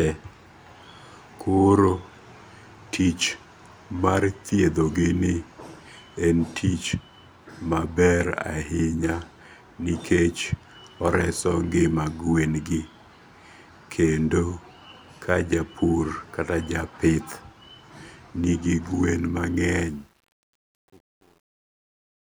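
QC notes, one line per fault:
19.79–22.38 s truncation distortion on a fade: the fade-out turns gritty, worst from 20.17 s; undithered steps suggest roughly 9-bit resolution.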